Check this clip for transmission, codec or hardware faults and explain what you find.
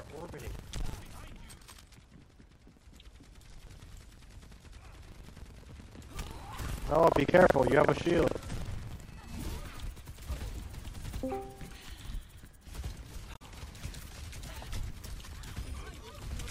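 Two faults are present.

From 0.00 to 9.23 s there is buffer tearing. The writing program and the reading hardware have slipped, so they cross inside every buffer period. A small slice of each buffer, roughly a sixth, replays audio from about a tenth of a second earlier, with hard joins on both sides. This produces a steady robotic buzz at 23.4 Hz, which fits a 2048-sample buffer.

From 13.31 to 13.42 s there is damaged data in a compressed stream. Part of the compressed data is wrong there. The decoder misreads those frames, loses sync and hunts for the next valid frame header. The result is a short chirp or squawk lasting about a tenth of a second.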